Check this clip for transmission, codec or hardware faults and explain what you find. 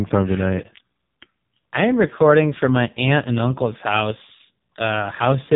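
There's one fault, and it runs the whole length of the speech: the AMR narrowband mobile codec, hitting it hard.

Throughout, everything above about 3.8 kHz is gone, leaving a boxy phone-line sound. The voice comes across buzzy and synthetic, since a vocal-tract model driven by sparse pulses is rebuilding it, and that heavy damage fits one of AMR-NB's lowest modes, around 5.15 kbps.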